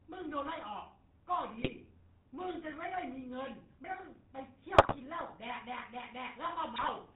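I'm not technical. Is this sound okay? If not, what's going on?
No. The whole clip has the sound of an old mobile phone call, caused by the GSM full-rate codec. This early phone system squeezes speech by imitating the shape of the throat and mouth and feeding it a simplified buzz, and it discards everything above 4 kHz. The result is a dull, buzzy, gravelly roughness on every syllable. It differs from simple muffling because the voice itself sounds coarse and grainy, not just quieter in the treble.

On top of that, there are three short bursts of GSM bit errors, at 1.60 to 1.78 s, 4.74 to 4.99 s and 6.76 to 6.91 s. A weak radio link corrupted some of the data describing the voice, so for a moment the tone and loudness go wrong and the speech breaks into squawks, pops and gargling. These are not clean dropouts or silent gaps. The sound keeps going but comes out mangled and strange.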